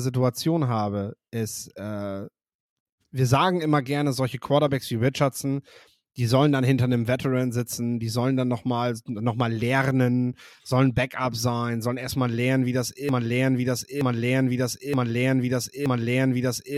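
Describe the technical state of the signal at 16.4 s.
The stream likely stalled and resent its last 0.92 s fragment, a broken-record loop from 13.09 s to the end, repeating four times back to back.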